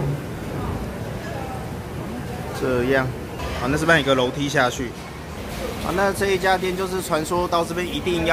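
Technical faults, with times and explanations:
Nothing technical stands out here; there's nothing to flag at any point in the clip.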